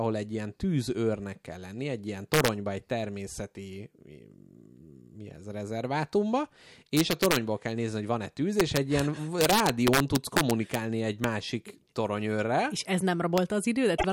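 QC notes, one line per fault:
2.34–2.48 s, 6.97–7.36 s, 8.60–8.99 s, 9.41–10.75 s, 11.24 s, 13.38 s: integer overflow. Loud peaks in the speech push past the largest integer value and wrap to the opposite sign instead of being limited. Each wrap throws the waveform across the full range and produces a harsh crack far sharper than clipping. The overdrive is about 2 dB in most cases and about 3 dB across the long 9.41–10.75 s stretch. At 13.38 s it sits right at the limit, at about 0 dB. The first event falls after "kell lenni egy ilyen" and before "egy természeti". The second falls after "mi ez rezervátumba" and before "kell nézni hogy".
13.94–14.05 s: damaged data in a compressed stream. Corrupted bytes in the stream make the decoder misread the frames at this point. It loses sync and searches ahead for the next valid frame header. The result is a short glitch about 0.1 s long, near the end of the clip.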